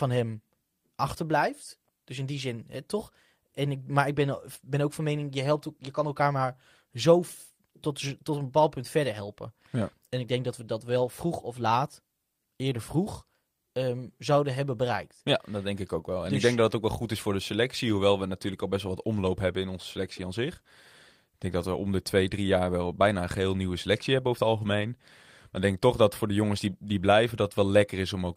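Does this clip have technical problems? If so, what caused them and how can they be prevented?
No, the recording shows no technical faults, so there is no cause to trace and nothing to prevent.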